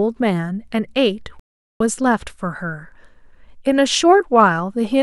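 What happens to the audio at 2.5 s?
Nothing goes wrong at 2.5 s; the speech runs through that moment intact, with no dropout, click or distortion.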